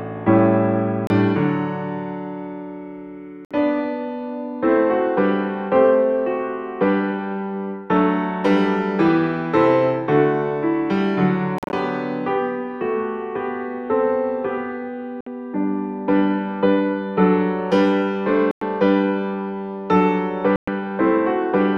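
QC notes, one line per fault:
1.07–20.68 s Bluetooth dropout, six times: 1.07–1.10 s (29 ms), 3.45–3.51 s (58 ms), 11.58–11.73 s (scattered gaps totalling 102 ms, longest 43.5 ms), 15.21–15.27 s (58 ms), 18.51–18.61 s (102 ms), 20.56–20.68 s (116 ms). Each is a hole of silence, after which the sound picks up further along as if it had kept playing. The skipped material, rather than a stall or a repeat, sets it apart from buffer underruns, and points to likely lost wireless packets.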